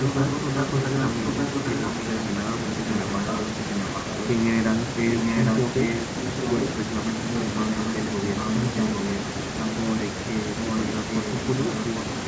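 A second copy of the speech trails the original by about 0.8 s from 0.02 to 2.25 s, 2.61 to 4.28 s and 5.12 to 6.68 s, a little quieter at first, then about as loud. This echo leak likely comes from a loudspeaker far end whose echo canceller let its microphone pickup return.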